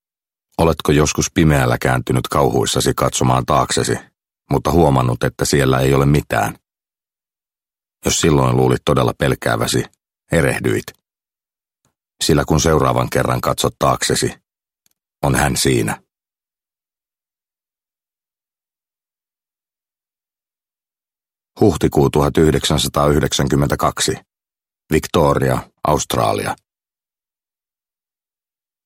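No technical faults occur at any point in the clip.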